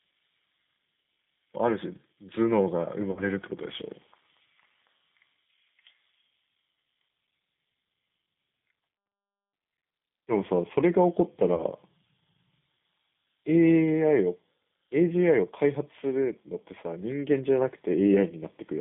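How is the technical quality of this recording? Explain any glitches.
The recording is degraded: the whole clip carries the sound of a narrowband low-rate speech codec, and two brief dropouts break up the speech.

Throughout, the audio has the character of the G.729 codec, consistent with its 8 kbit/s G.729A variant. The codec models speech with a vocal tract filter, a pitch predictor and a sparse set of pulses per frame instead of storing the waveform, and it discards everything above 4 kHz. The result is plainly audible: muffled, band-limited speech with a rough, slightly synthetic edge.

From 3.11 to 3.22 s and again from 11.54 to 11.64 s there is VoIP packet loss concealed by the speech codec. The gaps fit roughly three and two 20 ms packets going missing. The decoder filled each hole by repeating its last pitch and filter settings while lowering the gain. That produces a short stretched sound, a buzzy tone or coloured noise, that fades, and the voice sounds weak or smeared for a moment after real audio returns.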